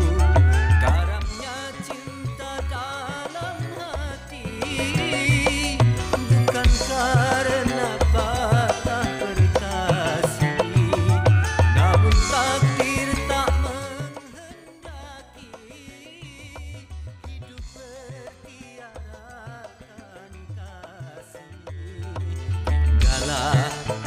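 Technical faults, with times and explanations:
21.73 to 23.13 s, zipper noise: a level shift of about 20 dB comes in unsmoothed steps of about 2 dB, roughly ten a second, each ticking where a smooth fade would glide.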